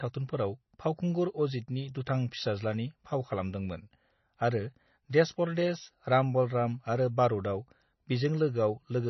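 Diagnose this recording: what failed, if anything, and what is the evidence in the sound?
The codec stage likely applied heavy MP3 compression, fitting roughly 24 kbps. Throughout, speech stops dead at 6 kHz and sounds watery and swirling.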